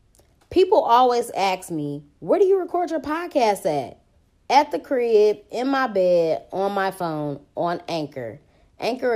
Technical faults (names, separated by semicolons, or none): none